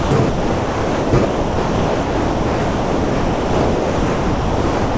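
A voice detector at the sending end likely judged this speech to be background and stopped transmitting, so the receiver filled in comfort noise. The speech drops out to steady noise from 0 to 0.11 s, 0.29 to 1.13 s, and 1.25 s to the end, with the call codec's band limit leaving nothing above 8 kHz.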